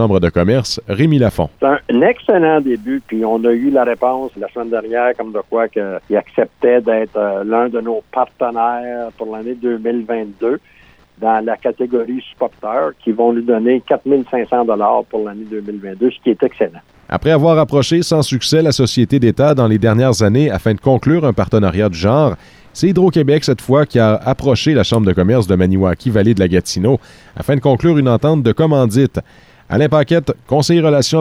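From 2.58 to 4.30 s the sound turns grainy: low bit depth without dither, likely truncation to roughly 9 bits. Signal-following error sits around 45 dB down, so quiet passages crackle. A waveform shows visible stair-steps; a spectrogram shows a gritty haze tracking the signal.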